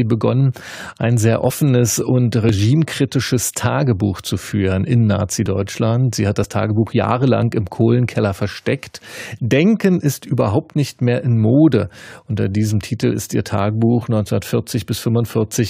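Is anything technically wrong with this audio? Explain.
Yes. There is overlap between stream segments at 0.52, 1.50, 2.49, 5.46, 6.44 and 7.42 s. The first falls just before "ein sehr", and the second just after "begonnen ein sehr". The stream arrives in one-second segments, and neighbouring time stamps overlap. The player trims that overlap from speech that was never duplicated. Between about 5 and 18 milliseconds vanish and the waveform jumps. Each one is heard as a small click or skip, spaced about a second apart except for a three-second gap between 2.49 and 5.46 s.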